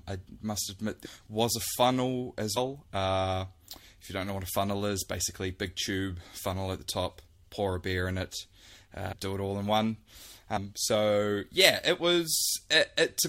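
Speech that jumps forward three times, at 2.56 s, 9.11 s and 10.56 s, losing roughly a fifth, three tenths and two fifths of a second of audio: compressed frames skipped, as runs of frames went missing or were rejected.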